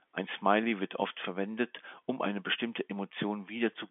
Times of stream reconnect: none

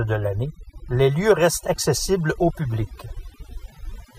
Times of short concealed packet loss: none

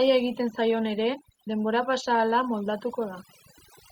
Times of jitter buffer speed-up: none

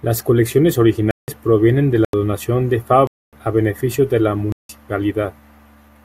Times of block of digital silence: 1.11-1.28, 2.05-2.13, 3.07-3.33, 4.52-4.69

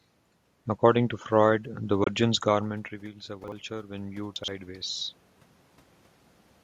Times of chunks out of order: 3.44-3.52, 4.36-4.48

